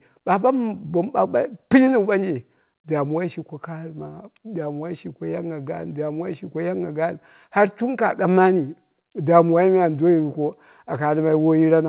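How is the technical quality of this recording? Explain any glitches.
Nothing here counts as a glitch: the speech comes across as a regular phone call carried over a G.711 mu-law link at 64 kbps, so it has that familiar narrowband sound with nothing above 4 kHz, and there's no dropout or other fault to explain.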